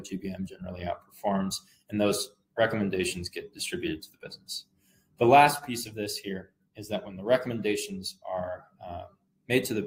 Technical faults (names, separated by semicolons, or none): none